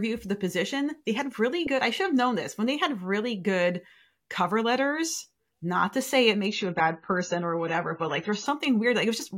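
After "not to say it", the adaptive stream dropped to a lower bitrate from 6.46 to 8.46 s: treble vanishes and artefacts rise, gaplessly.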